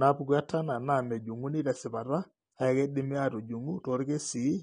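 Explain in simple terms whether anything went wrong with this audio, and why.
From start to end, the speech sounds dull and smeared with a fizzy, warbling edge: AAC compression, likely set too low, discarding fine detail to save space.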